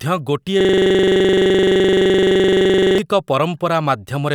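At 0.61 s the speech locks into a system hang loop that lasts until 2.98 s. The output freezes on a single 42.7 ms slice, which fits a 2048-sample buffer, and replays it 56 times, producing a rough buzzing stutter at 23.4 Hz. Unlike an underrun dropout, there are no silent gaps. Each cycle is an identical copy, so the sound stays rigidly mechanical rather than broken or jittery.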